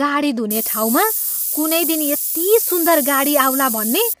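Throughout the speech, harmonics sound rough and grainy with noise filling the gaps between them, likely low-delay AAC compression at a rate fitting about 32 kbps; the spectrogram shows smeared harmonics and nothing above 15.6 kHz. From 0.51 to 4.13 s, low bit depth with noise shaping adds a steady hiss roughly as loud as the speech, which fits a 4-bit signal; the spectrogram shows noise climbing toward the top band, and the waveform shows coarse steps.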